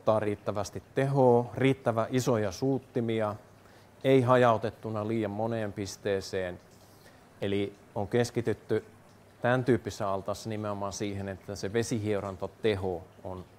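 Two sharp single clicks, at 7.43 s and 10.02 s, are likely dropped samples: a fraction of a millisecond is missing from the stream, so the waveform jumps abruptly to a later value. Each shows as a thin vertical line across the spectrogram.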